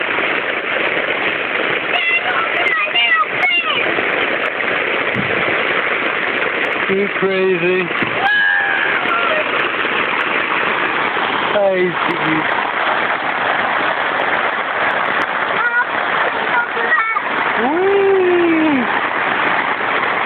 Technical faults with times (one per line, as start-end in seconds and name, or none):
0.00-20.26 gain pumping